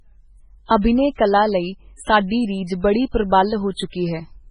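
A watery, swirling quality runs through the whole of this speech recording, with metallic chirping on s sounds and nothing at all above 10.4 kHz. That points to heavy MP3 compression, likely at a very low bitrate around 16 kbps: the encoder cuts the treble and lets weak frequency lines flicker on and off between frames. At 0.81 to 0.84 s, just before "ਕਲਾ ਲਈ", a brief hiss of about 27 ms leads into a softened onset. This is pre-echo, where quantisation noise meant for the loud attack spreads back over the quiet moment before it.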